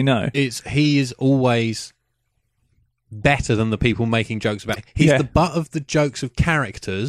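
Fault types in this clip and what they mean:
Damaged data in a compressed stream: corrupted bytes in the encoded stream made the decoder misread frames and lose sync until it found the next valid header. This produced brief 50 ms glitches at 0.30 s and at 4.72 s, right after "the people making jokes".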